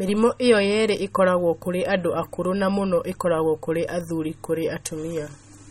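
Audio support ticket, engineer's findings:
Watery, swirly speech throughout, chirpy s sounds; likely MP3 compression, low bitrate near 32 kbps. Spectrogram: hard ceiling at 16 kHz, weak bins flickering on and off between frames.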